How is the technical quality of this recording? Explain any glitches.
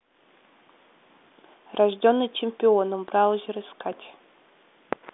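No glitches or faults turn up anywhere in the recording. The speech is carried over a G.726 ADPCM link at 40 kbit/s, so it has the narrow telephone band of roughly 250 Hz to 3.6 kHz with nothing above 3.8 kHz, and any coding noise is at most faint.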